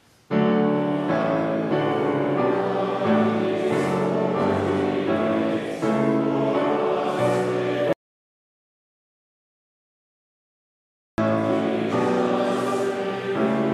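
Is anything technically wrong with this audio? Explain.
Yes. From 7.93 s to 11.18 s there is an audio dropout to silence lasting about 3.25 s. The sound stops abruptly mid-flow and returns just as suddenly, and the gap holds no room tone at all, only silence. The likely cause is an input that was lost while recording carried on writing empty samples, so whatever occurred then is gone. On a waveform it appears as a flat line; on a spectrogram, a fully black vertical band.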